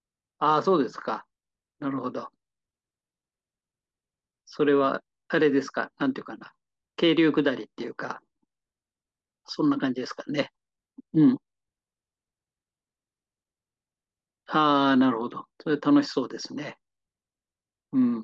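No technical faults can be heard anywhere in the recording.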